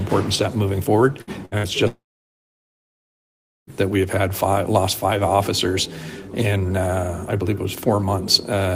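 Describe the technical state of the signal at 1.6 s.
At 1.6 s the signal sits inside a burst of packet loss spanning 1.58 to 1.66 s, just after a similar one at 1.45 to 1.55 s. The receiver stretches and fades the last sound for 56 ms, then resumes with 60 ms missing.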